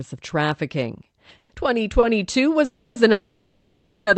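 At 1.37 s, just after "of trafficking", the audio freezes for about 0.14 s. The last sound is held as a fading buzz, with a brief dropout of about 10 ms, and then the speech resumes where it left off. Nothing is lost, but a gap has been inserted. This is a call audio freeze. The likely cause is packets held up in transit, so the jitter buffer ran empty and the receiver filled the wait.

From 2.00 to 2.05 s there is a short stall from a late packet. One packet arrived after it was due. The receiver stretched the last sound by about 30 ms until the packet came, then carried on from the same point. The result is a slightly drawn-out sound with a faint buzz. No speech is missing.

Two longer freezes follow. From 2.65 to 2.98 s, the last sound is extended as a fading buzz for about 0.31 s with no silence. From 3.12 to 4.09 s, the fill lasts about 0.95 s and contains a dropout of about 10 ms. 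In both freezes the speech picks up where it stopped.

Throughout, the Opus call path cuts off everything above 8 kHz, and the coding noise fits a bitrate of around 40 kbps.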